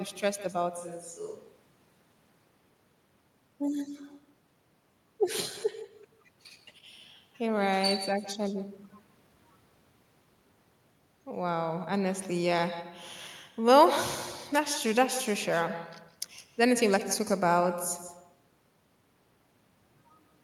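Speech with an uncancelled echo throughout: each phrase is shadowed roughly 150 ms later by a thinner copy about 15 dB down, visible on a spectrogram as faint, delayed duplicates of every syllable. From 0.78 to 2.44 s the sound turns abruptly hollow and roomy, a few dB quieter with less bass and a higher noise floor. This is likely a switch to a distant microphone, seen on the waveform as a lower envelope with sharp edges at both ends.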